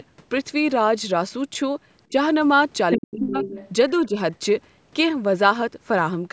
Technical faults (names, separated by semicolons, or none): speech suppressed in double talk; other side's voice leaking through